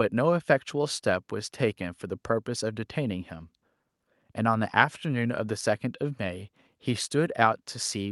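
Nothing in the speech recording points to a technical fault: the signal holds steady, with no dropouts, level problems or timing disturbances anywhere in the audio.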